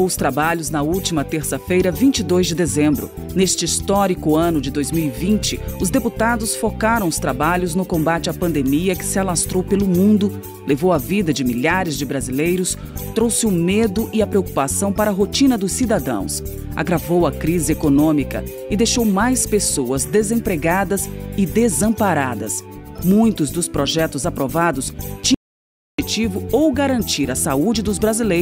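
A single audio dropout to silence cuts the sound off abruptly at 25.34 s and brings it back just as suddenly at 25.99 s, leaving a gap of about 0.64 s. The gap is dead silence with no room tone, and whatever sounded during it is lost. The likely cause is the input briefly dropping out, through a disconnected device, failed link or accidental mute, while recording carried on writing silence. On a waveform this shows as a flat line; on a spectrogram, a fully blank vertical band with hard edges.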